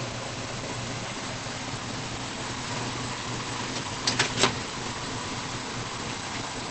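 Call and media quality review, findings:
Muffled, hoarse sound throughout, no content above 8.4 kHz. Likely Opus compression: low-rate speech (SILK) mode at wideband, plainly audible coding damage, band limit and roughness fitting roughly 16 kbps.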